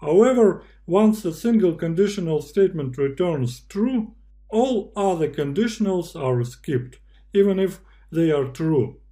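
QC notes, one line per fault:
Throughout, mains hum: a steady low tone at 50 Hz sits under the whole clip, with some low harmonics at 100 and 150 Hz, at roughly 30 dB below the programme level. Power-line current is leaking into the signal path, most plausibly through a ground loop between connected equipment or magnetic pickup from a nearby transformer. Because the mains frequency stays essentially fixed, the tone is constant in pitch and loudness.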